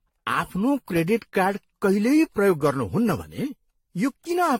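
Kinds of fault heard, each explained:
Generation loss: The whole clip has that swirly, hollow quality, with smeared consonant attacks, worse than a single lossy encode would give. Each pass through a codec re-quantises on a shifted frame grid, so the damage stacks up. Here it's likely the result of around seven rounds of AAC-LC, which fits a chain ending near 64 kbit/s, and there's nothing above 16.5 kHz.
One channel drops out: From 3.22 to 3.39 s the level suddenly sinks by about 6 dB for a brief moment, then snaps back. That's the sign of one side of a stereo feed vanishing before the two are summed to mono: the shared content is left with only half its contribution, and anything unique to the missing side is simply gone. It's likely a momentary loss of one channel somewhere upstream.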